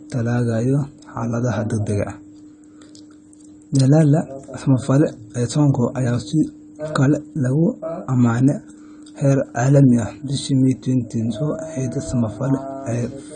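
Throughout the speech, nothing sounds above 9.1 kHz and the audio is dull, smeared and warbling, likely AAC compression quantising the spectrum coarsely at a bitrate near 32 kbps.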